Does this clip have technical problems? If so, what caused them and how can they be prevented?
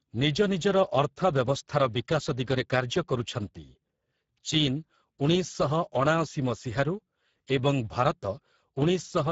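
Yes. Speex codec damage runs throughout this speech clip: the sound is noisy and hoarse, and nothing lies above 7.7 kHz. The CELP coder has too few bits for the excitation, which fits a bitrate near 10 kbps, and the top band is only a shaped noise fill. To prevent it, encode at a higher Speex quality setting or use a modern codec such as Opus.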